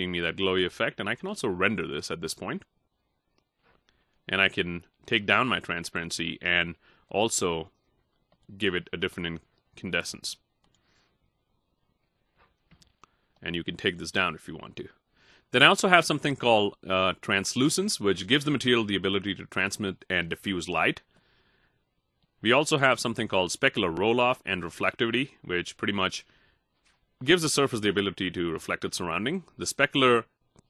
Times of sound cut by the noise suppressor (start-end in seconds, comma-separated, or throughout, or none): none